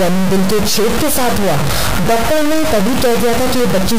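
From start to finish the audio carries a harsh, buzzy distortion, and even the quiet stretches fill with a loud, grainy noise. That points to a stuck bit, likely a high-order bit held at a fixed value, so about half the samples jump by a step of around -10 dBFS. Clipping distorts only the peaks and leaves pauses clean. Coarse quantization adds noise that tracks the signal level. This noise stays loud and fixed.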